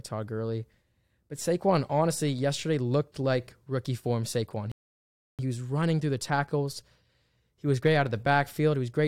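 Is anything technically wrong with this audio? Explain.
Yes. The speech has one rebuffering stall, from 4.72 s to 5.39 s. The playback simply stops and goes silent for about 0.67 s. The player ran out of downloaded audio and had to wait for more to arrive. When the data came in, playback picked up at the exact point where it froze. No sound is skipped or lost. The gap only adds time.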